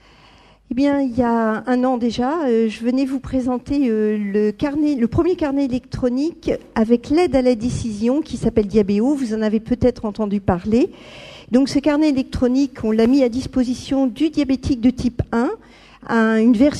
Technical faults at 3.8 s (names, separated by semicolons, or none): none